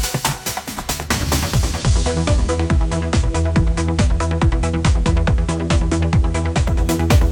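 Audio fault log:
1.44–6.91 s, digital radio blending to analogue: the receiver cross-fades to FM over 390 ms, dropping about 3 dB. Hiss rises, roughly 30 dB down.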